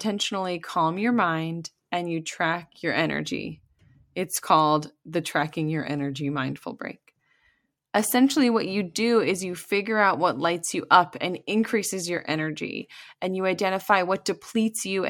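Listening to this speech recording, nothing stood out as a technical problem at any point.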